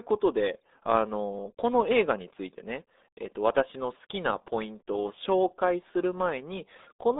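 From start to finish the speech carries the RealAudio 14.4 codec's signature: a narrow band running from about 250 Hz to 3.7 kHz, with nothing above 3.8 kHz. The codec models the voice so coarsely, at a rate that points to roughly 8 kbit/s for dial-up, that the damage is heavy. Consonants lose their edges, vowels turn muffled and gargly, and a watery, synthetic roughness sits under every syllable.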